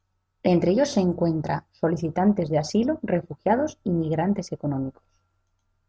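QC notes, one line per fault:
No faults noted in this speech clip.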